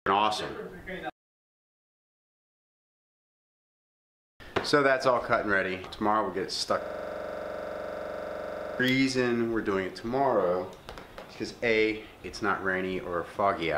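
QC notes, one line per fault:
6.82–8.80 s, system hang loop: the system froze while the audio hardware kept replaying the same ring buffer, so one 42.67 ms slice of sound repeats exactly, about 46 times, for roughly two seconds. That slice length fits a 2048-sample buffer. Because each repeat restarts at the same point, the loop rate of 23.4 Hz is heard as a hard, rapid stutter on the edge of a buzz instead of the continuing sound.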